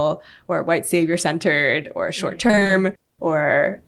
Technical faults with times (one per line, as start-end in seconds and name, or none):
2.47-2.71 repeated packet loss (robotic sound)